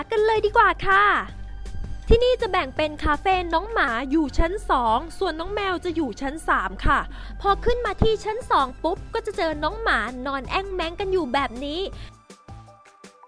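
From 3.88 to 7.24 s the sound sags 1.47 semitones and slows to 0.919 times normal speed, pitch and tempo dropping together. This is a wrong sample rate: playback ran slower than recording without conversion, which fits 24 kHz material played at 22 kHz.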